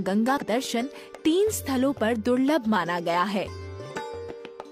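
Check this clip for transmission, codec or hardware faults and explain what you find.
Two short bursts of damaged data in a compressed stream, at 0.38 to 0.44 s and 3.90 to 3.95 s. Corrupted bytes make the decoder misread frames and hunt for sync, giving a brief chirp, squawk, click or short hole.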